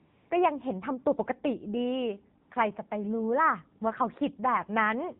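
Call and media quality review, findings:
AMR narrowband mobile codec: buzzy, synthetic speech for the whole clip. 8 kHz sampling leaves nothing above 4 kHz on the spectrogram. The coarseness points to a low-rate mode around 7.4 kbps.

AMR comfort noise: steady, smooth synthetic noise at 0.00–0.30 s and 2.42–2.50 s. Silence detection stopped speech frames and the receiver filled the gaps. Flat, featureless noise bands show on the spectrogram.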